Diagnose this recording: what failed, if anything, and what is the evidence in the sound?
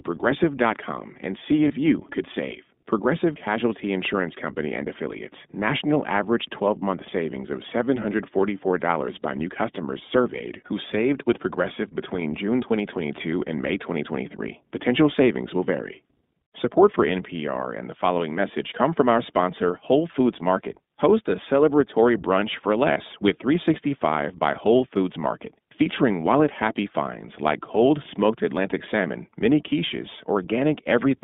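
The codec stage is at fault throughout. The speech is confined to a band of roughly 150 Hz to 3.7 kHz, with nothing above it. The voice has a plainly rough, slightly synthetic grain across all 31 seconds. That is the iLBC codec at work. It rebuilds each frame's excitation independently, and the coarse modelling leaves audible texture. The band limit and character fit iLBC at 15.2 kbps with 20 ms frames.

The network stage adds lost iLBC frames at two points. From 1.68 to 1.71 s, between "and see" and "you could save", the sound briefly turns into a held, buzzy vowel. At 22.92 to 22.98 s, after "a celebratory brunch for", a smear twice as long follows. These gaps fit one and two lost 20 ms packets. The decoder covered each one by repeating the last pitch cycle mixed with noise. Because frames stand alone, clean speech returns immediately.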